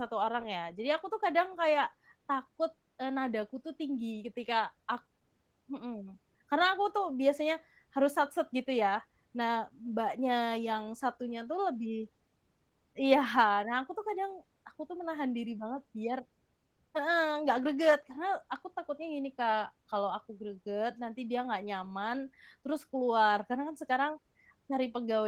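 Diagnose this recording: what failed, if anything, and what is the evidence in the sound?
The failure is at the codec stage: Opus voice compression, plainly audible throughout the speech. The band stays full, but the speech sounds hoarse and slightly robotic. That points to hybrid mode near 16 kbps, where the linear-prediction layer codes the excitation coarsely.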